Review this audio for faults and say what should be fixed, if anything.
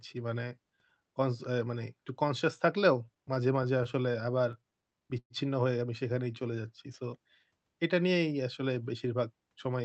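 Repeated stalls (stutter) run from 3.05 to 5.32 s. Packets arrived late, so the jitter buffer kept running dry, and the receiver stretched the last sound to cover 22 short gaps. That adds about 320 ms in total, with the longest gap 107 ms and roughly 14% of that stretch concealed. Nothing is lost, but the audio drags and catches. To prevent it, give the jitter buffer enough headroom for the network's real delay variation, or fix the congestion causing late delivery.

Jitter buffer slow-down occurs from 6.13 to 6.68 s. To rebuild a depleted reserve, the receiver repeated single pitch periods, adding 76 ms and playing the audio at 88% speed. The pitch stays the same, but the sound is drawn out. To prevent it, keep the buffer from draining so it doesn't have to stretch audio to catch up.

Jitter buffer speed-up occurs from 8.69 to 9.80 s. The buffer held more than its target, so the receiver cut short pitch-period slices, removing about 150 ms and running at 111% speed. 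The pitch stays the same, but the delivery sounds hurried. To prevent it, smooth out bursty packet arrival so delayed packets don't pile up and force compression.

The Opus call path itself is band-limited at 8 kHz.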